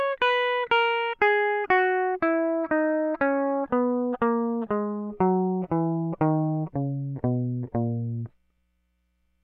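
Music, with no audible technical fault anywhere in the clip.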